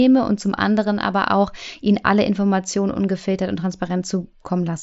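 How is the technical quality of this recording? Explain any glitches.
No glitches to report: the speech comes over an mSBC Bluetooth headset link at roughly 61 kbps, with its expected band limit near 7.7 kHz and the light coding grain that link leaves on it.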